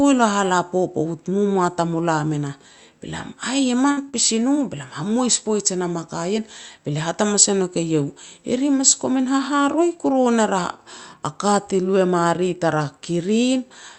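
Speech carried over a call path whose codec band-limits the sound, with nothing audible above about 8 kHz. At 3.91 to 4.00 s a burst of packet loss drops several packets in a row. The receiver conceals the gap by extending the last sound for about 55 ms and fading it into a held buzz or hiss, then resumes with roughly 60 ms of speech gone. Just after, at 4.09 to 4.16 s, a short stall from a late packet empties the jitter buffer. The receiver stretches the last sound by about 43 ms until the packet arrives, so a sound hangs on too long with a slight buzz, but nothing is skipped. At 9.61 to 9.86 s a jitter buffer speed-up trims excess buffered delay by removing short pitch-period pieces, about 40 ms in all. The speech runs at about 113% speed at unchanged pitch, sounding briefly hurried.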